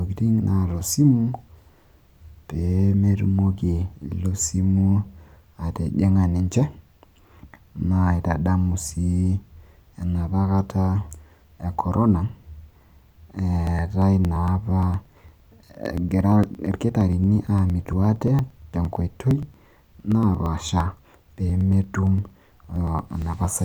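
From 13.67 s to 23.57 s, periodic USB or driver dropouts occur: something stalls the audio path every 0.115 s and around 10 ms of audio is skipped each time. The speech gains a steady train of about a hundred ticks.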